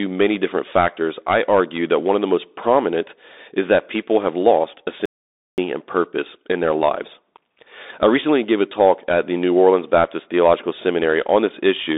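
From start to finish the speech passes through a Bluetooth CVSD headset codec, the narrowband delta-modulation scheme used on hands-free links. Each sample carries only one up-or-down bit and an adapting step size, so fast loud high-frequency sounds outrun the step and break up. Here the damage is plainly audible: sibilants turn scratchy and a granular hiss sits under the speech. The band is confined to roughly 250 Hz to 3.7 kHz, with nothing above 3.8 kHz, consistent with a 64 kbps CVSD link.

At 5.06 s, right after "people have lost a", there is an audio dropout to silence lasting about 0.52 s, until 5.58 s, where the speech resumes with "and purpose in their". The gap is silent with no room tone, and whatever was said in that half-second is gone. The likely cause is a brief loss of the input, such as a dropped wireless link or a momentary mute, while recording continued and wrote silence.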